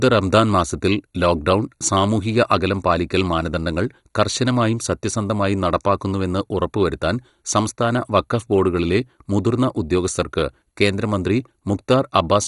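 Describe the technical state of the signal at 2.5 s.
At 2.5 s the speech carries the same heavy damage present throughout the clip, likely from MP2 compression at a rate that fits about 56 kbps. With bits starved, upper sub-bands drop out, leaving nothing above 11.2 kHz, while coarse quantisation of the remaining bands gives a dull, gurgling, granular texture.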